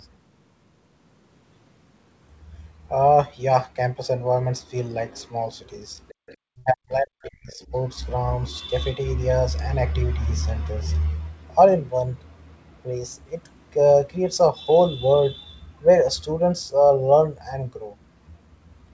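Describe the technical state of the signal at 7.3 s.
The speech is heavily ducked there, dropping by up to about 40 dB. This is speech suppressed in double talk from 6.53 to 7.73 s, likely an echo canceller turning down this side's speech along with the echo while both sides spoke. Just before, from 7.25 to 7.29 s, a faint scrap of the other side's voice leaks through, about 35 dB below the speech, likely from echo the canceller failed to remove.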